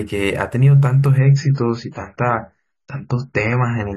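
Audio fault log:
1.18–3.97 s, adaptive stream at a lower bitrate. Quality drops suddenly with no gap. Nothing above 7 kHz remains, which fits a much lower-bitrate version being played.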